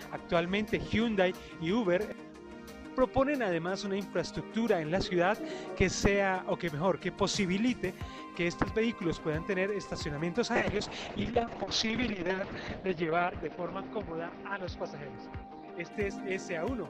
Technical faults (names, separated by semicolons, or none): call bitrate drop